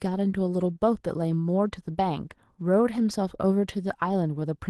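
Throughout the speech the pacing feels faintly unsteady, as if it were dragging very slightly. This is clock drift between sender and receiver: the sender's clock runs roughly 2 percent slow, so the receiver's jitter buffer keeps draining instead of holding steady.

From 0.18 s to 4.69 s there are small, unevenly spaced hiccups where brief fragments seem to repeat, stretching the audio to about 98 percent speed. These are repeated timing corrections, all of them padding out the audio as the receiver refills its starved buffer, adding about a tenth of a second in total. The audio passed through an Opus call path, which can be heard in the treble rolling off around 12 kHz.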